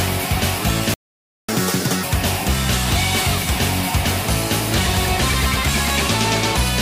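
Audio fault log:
0.94–1.49 s, playback stall: the sound cuts out mid-flow into about 0.55 s of silence, then resumes. The output went silent because the player likely ran out of buffered data or had its audio thread blocked until it recovered.
1.49–2.03 s, catch-up at higher speed: straight after the gap the audio runs at double speed and sounds raised by around ten semitones, then returns to normal. The player resamples its backlog faster to win back the lost half-second.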